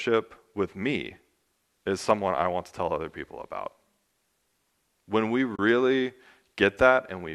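At 5.56 to 5.59 s the speech briefly fades out and back in, leaving a soft-edged hole of roughly 30 ms. This is AAC frame loss with muting, which fits about three lost frames. The decoder zeroed their spectrum, and the overlapping windows smoothed the edges, heard through the light coding of what is likely low-delay AAC compression.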